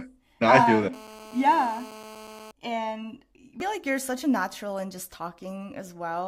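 GSM phone buzz runs from 0.93 to 2.51 s in this speech recording: a hard, raspy 217 Hz tone with a dense string of harmonics, sitting about 18 dB below the speech. A nearby 2G phone on a call pulses its transmitter 217 times a second, and the audio circuitry rectifies those radio bursts, so the buzz holds steady and ignores the speech. Damaged data in a compressed stream shows up at 3.60 s as a brief glitch. Corrupted bytes there made the decoder misread the affected frame, lose sync and jump ahead to the next valid frame header.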